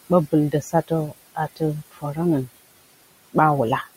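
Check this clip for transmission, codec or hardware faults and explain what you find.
The clip has two faults, both from noise suppression on the speech.

Noise suppressor artifacts run through the whole clip. The suppressor pulls down bands it judges to be steady noise, frame by frame, by about 18 dB. The room noise, about 18 dB below the speech, sinks in pauses, then swells under speech.

Speech cut by the noise suppressor occurs from 0.52 to 0.91 s and from 1.91 to 2.18 s. The suppressor mistook quiet speech for noise and lowered it with the background. Drops reach about 16 dB and then about 19 dB. Roughly a tenth, then a fifth of a second sounds swallowed and faint.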